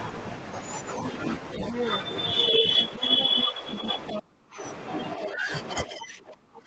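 A speech clip with two recurring call-path problems. The first is the other side's voice leaking through: from 1.68 to 2.01 s a second talker sits only about 5 dB under the main speech, and from 3.03 to 4.21 s it returns about 10 dB down. This is likely residual loudspeaker echo that the canceller left in the microphone signal. On a spectrogram it shows as a second, independent set of harmonic stripes laid over the main voice. The second problem is speech suppressed in double talk, probably the same canceller clamping down while both sides talk. There is a shallow dip of about 5 dB at 2.51 to 2.64 s. The heaviest cut, about 30 dB, falls across 3.0 to 4.63 s, affecting roughly 0.7 s in total. Further drops come at 5.16 to 5.52 s (about 10 dB) and from 5.87 s to the end (about 20 dB). The waveform shows abrupt notches in the envelope there, and the spectrogram shows the upper harmonics thinning or vanishing in those stretches. 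Nothing appears above 8 kHz.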